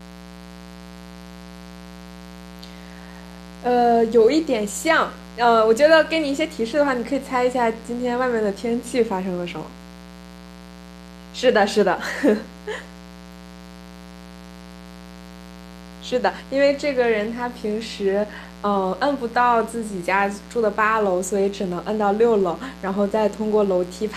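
Mains buzz runs through the entire speech clip: sharp 60 Hz switching spikes with harmonics into the kilohertz range give a steady raspy buzz, roughly 20 dB below the voice.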